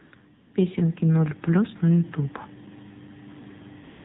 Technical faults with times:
0.00-4.04 AMR narrowband mobile codec
0.00-0.54 AMR comfort noise
3.84-4.04 AMR comfort noise

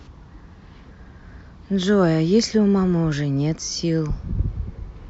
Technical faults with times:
none

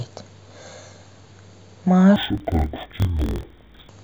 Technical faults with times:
2.16-3.90 interleaved audio read as planar

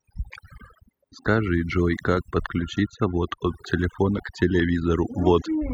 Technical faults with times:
0.00-5.73 overdone noise removal

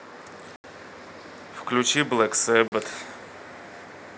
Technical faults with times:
0.56-0.64 block of digital silence
2.68-2.72 block of digital silence

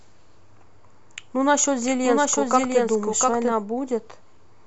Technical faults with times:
1.86-3.52 doubled audio track

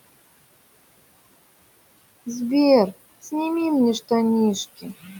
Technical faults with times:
0.00-5.19 noise suppressor artifacts
4.77-5.19 speech cut by the noise suppressor

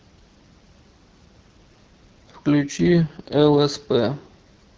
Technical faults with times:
2.60-3.59 AMR rate drop

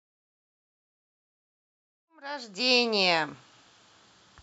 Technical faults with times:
none

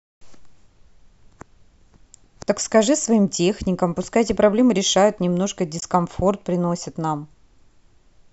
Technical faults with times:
5.79-5.83 damaged data in a compressed stream

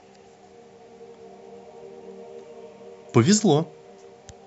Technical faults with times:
none

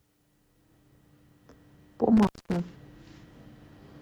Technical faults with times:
2.17-2.60 intermittent contact

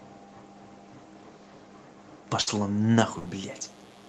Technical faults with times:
2.41-2.49 burst of packet loss
3.03-4.08 mains buzz
3.19-3.38 burst of packet loss

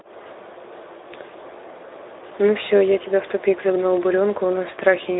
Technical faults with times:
0.00-5.19 Speex codec

